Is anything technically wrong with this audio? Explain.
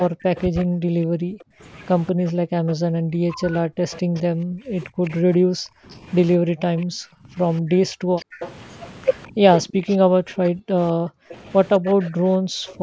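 Yes. This speech has two faults from a speakerphone call's echo handling.

Echo leak occurs at 0.0–0.65 s, 2.07–2.3 s, 3.91–5.97 s, 7.56–9.96 s and 11.3–12.73 s. A faint copy of the speech trails it by about 209 ms, at roughly 15 to 25 dB below it. The likely cause is a far-end echo canceller that let loudspeaker pickup through. On a spectrogram, the speech harmonics show a fainter shifted duplicate.

Speech suppressed in double talk spans 0.1–12.82 s and affects roughly seven seconds in total. The speech dips or drops out in pieces, by up to around 40 dB. This is likely because the canceller mistook overlapping talk for echo and turned both down. In the waveform, the envelope shows abrupt gouges and gaps.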